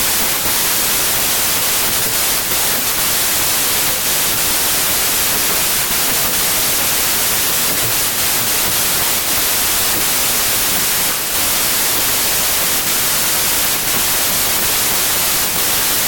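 A speech recording runs for the whole clip under a wrong sample width fault. Packed 24-bit data are being read as 32-bit samples. Most values mix bytes from neighbouring samples, so loud noise buries the speech. It plays 1.33 times too fast and too high in pitch.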